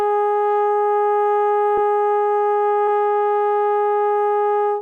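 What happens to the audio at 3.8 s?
Nothing goes wrong at 3.8 s: the music plays through that moment intact, with no dropout, click or distortion.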